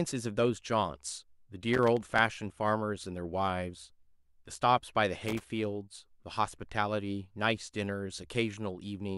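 A worn or dirty contact in the signal chain of this speech recording is making and breaking as it shifts, causing loose connector crackle: the audio is chopped into irregular scratchy bursts, from 1.74 to 2.19 s and again from 5.28 to 5.44 s.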